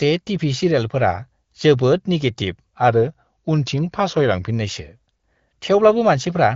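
From 2.88 to 4.51 s the speech slows by about 5.6% and drops roughly a semitone, then snaps back, most likely a drift correction step from clock-matching software.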